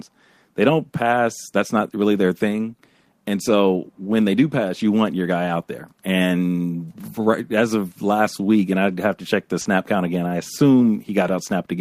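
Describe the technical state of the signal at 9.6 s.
At 9.61–9.67 s, between "have to check the" and "count again I", short concealed packet loss: about 40 ms went missing, and the decoder extrapolated over it, leaving a brief smear.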